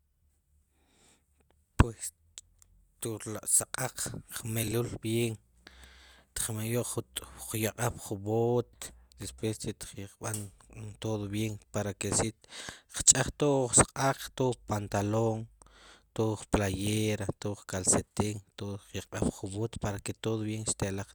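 A garbled flutter hits at 4.63–4.72 s and again at 8.73–8.95 s: frames out of order, adjacent 40 ms and 80 ms blocks decoded swapped, with no time lost.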